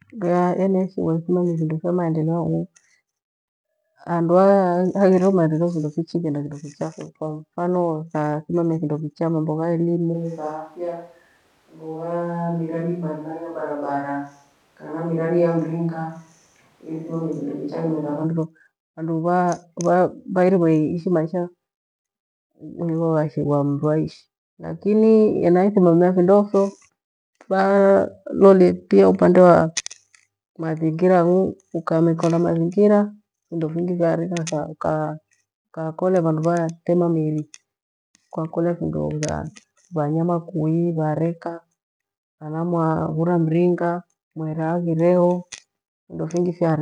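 At 10.15 s the speech abruptly turns roomy and hollow, thinner in the bass and about 5 dB quieter, with background noise now audible some 35 dB below the voice. At 18.22 s it snaps back just as suddenly. This is a switch to a distant microphone, likely because the close microphone dropped out. Unlike added reverb or a tonal filter, the level drop and extra room noise arrive together, hard-switched rather than faded.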